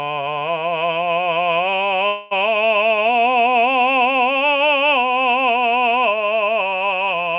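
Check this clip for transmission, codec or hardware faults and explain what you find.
One transmission fault is audible in this music, which is heard through a narrowband call path with nothing above 4 kHz, consistent with G.711 mu-law. From 2.08 to 2.33 s there is a call audio freeze. The music stalls into a fading buzz or hiss for about 230 ms, likely because delayed packets emptied the jitter buffer. It then resumes exactly where it stopped, with nothing lost but running late by that amount.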